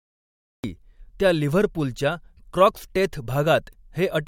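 A speech clip with a cut-off start. It opens with digital silence until 0.64 s, then the sound begins abruptly mid-syllable, just before "त्या लिव्हरपूलच्या क्रॉक्सटेथ". There is no natural attack or fade-in. Recording or streaming began late, so the opening was lost.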